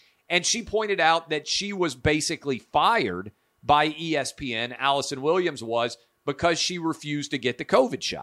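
Speech recording with no audible technical faults.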